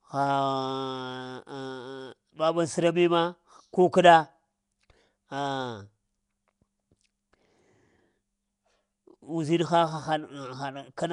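From start to finish the speech carries a rough, hissy halo and a smeared, underwater quality, most likely Nellymoser compression: short blocks coded at two bits a sample, with starved bands refilled by noise. A spectrogram shows blotchy noise patches and nothing above 10.6 kHz.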